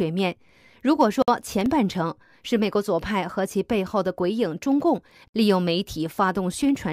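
A brief hole of about 56 ms cuts into the speech at 1.22 to 1.28 s, a gap at a join of encoded pieces where separately encoded segments were butted together with their encoder delay and end padding left in. From 1.39 to 1.66 s a gritty crackle tears across the speech. This is processor overload crackle: several buffers of roughly 3 ms each missed their deadline and dropped out as tiny silences. The gap at a join returns at 5.28 to 5.34 s, about 64 ms long, four seconds after the first, which fits joins falling between pieces encoded 4 s apart.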